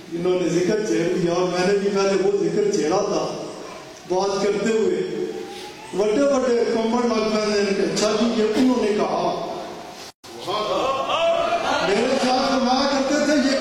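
A gap at a join of encoded pieces opens at 10.10 s and lasts about 134 ms, until 10.24 s. The audio appears to have been encoded as separate segments and then butted together untrimmed, so the encoder's start-up delay and the padding of the final frame both remain at the seam. The continuous sound drops abruptly into silence, its edges smeared by the codec, then resumes exactly where it broke off.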